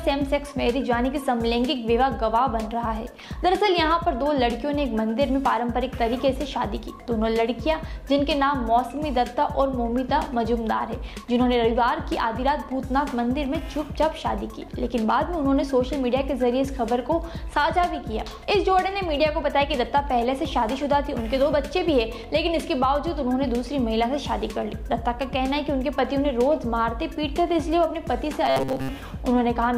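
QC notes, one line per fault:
28.46–28.89 s robotic sound from repeated short buffers: rigid metallic 133 Hz buzz, likely a roughly 7.5 ms segment replayed over most of the span.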